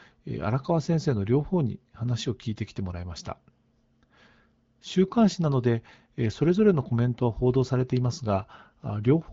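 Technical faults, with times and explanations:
No technical faults are heard in this speech.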